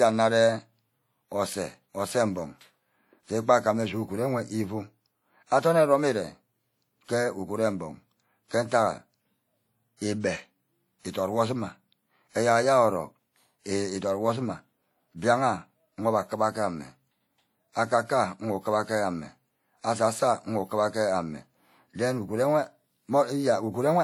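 The whole speech clip has a washy, ringing quality with hiss that swells and fades along with the talker, and the damage is easy to hear. That's most likely WMA compression, and the smearing fits a low bitrate, something like 48 kbps.

Then there's pre-echo, from 9.97 to 10.01 s and again from 10.99 to 11.05 s, just before "idot wor". The codec spreads noise meant for a sharp onset back over the quiet moment before it, so each attack gets a brief hiss of about 50 ms in front and sounds softened.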